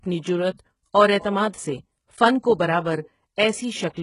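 Throughout, the speech carries heavy HE-AAC compression, likely at a very low bitrate around 12 kbps. Treble rebuilt by band replication stops at 11.1 kHz and sounds metallic and gritty, not merely dull as with a plain low-pass.

At 3.36 s, just after "سے فن کو برابر", pre-echo puts a short hiss before a sharp attack. Codec noise spreads into the quiet gap ahead of the onset, unlike a click, which lands on the attack itself.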